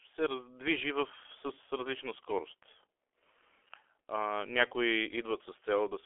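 Throughout the speech, heavy G.723.1 codec damage: nothing survives above 3.8 kHz, and the band sits near 300 Hz to 3.4 kHz. Long 30 ms frames smear consonants and add hoarseness, which fits roughly 6.3 kbit/s. Plain band-limiting would muffle without this grainy roughness.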